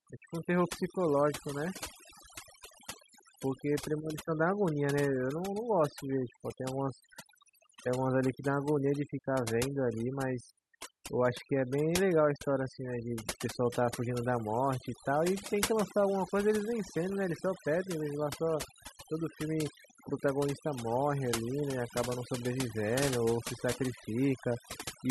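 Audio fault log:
throughout, overdone noise removal: the denoiser was pushed way too hard, so any frequency band sitting near its noise estimate gets squashed or shut off. The background drops and breaks up into little twinkling specks.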